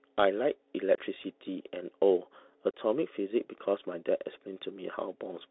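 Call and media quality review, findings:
Bluetooth CVSD headset codec, whole clip. Speech confined to roughly 250 Hz to 3.6 kHz, nothing above. Granular hiss under the speech; s sounds scratchy, loud bright passages distorting as the 1-bit delta step fails to keep up. Points to a narrowband 64 kbps CVSD headset link. Distinguished from plain band-limiting or low-bitrate transform codecs by the slope-overload grit and the hiss that tracks the speech.

Unconcealed Bluetooth headset packet loss, 0.95–0.98 s and 2.71–2.74 s. Hard-edged holes of about 26 ms and 30 ms, with speech returning briefly quieter. Fits a short run of dropped headset voice packets filled with silence. Unlike jitter-buffer concealment, no smearing or repeated sound; unlike a stutter, nothing is replayed.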